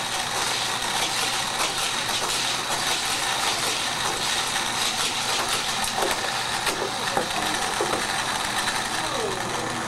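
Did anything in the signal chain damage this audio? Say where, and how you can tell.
Yes: dropped buffer (overrun) at 2.55 s and 5.97 s, heard as jumps where the sound skips ahead a few milliseconds, likely from samples overwritten before the driver collected them.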